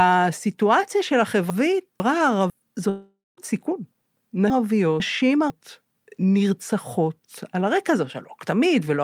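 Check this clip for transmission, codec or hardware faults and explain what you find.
The clip shows two transmission faults: chunks played out of order twice, and one long network dropout.

Chunks out of order, 1.5–2.5 s and 4.5–5.5 s: a 500 ms chunk arrived one chunk late and played after its successor, giving a jumbled moment.

Long network dropout, 2.89–3.40 s: audio likely stopped arriving, so the receiver extended the last sound as a fading buzz, then about 0.2 s of silence before the speech resumes with a gap.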